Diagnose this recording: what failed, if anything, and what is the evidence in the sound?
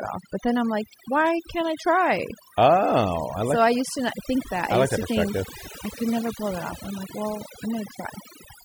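The call-processing stage failed: a noise suppressor set far too aggressively, an overdone noise removal that runs through the whole clip. It judges each frequency band against its noise estimate and pulls down any band that sits close to it, so the faint parts of the speech are cut along with the noise. The background drops and breaks up into twinkling specks.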